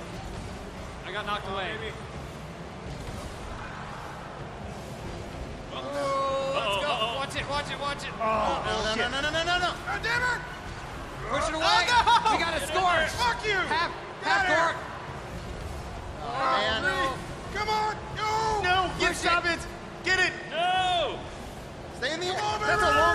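Compressed frames skipped at 9.22 s and from 16.40 to 16.45 s: each time the audio jumps ahead by about 50 ms, because whole compressed frames were missing from the file or rejected as damaged by the decoder, leaving an audible join where playback resumes.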